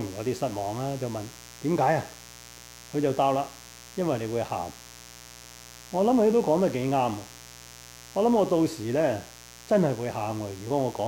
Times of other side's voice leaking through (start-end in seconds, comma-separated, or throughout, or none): none